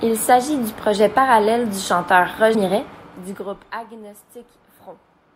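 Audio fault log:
2.54 s, compressed frames skipped: right after "projet parallèle du chanteur", the speech jumps forward by about 150 ms, losing a short stretch of the phrase. Several consecutive compressed frames were never decoded, either absent from the stream or rejected as corrupt, so playback resumes later in time. The gap length fits roughly seven frames of about 21 ms each.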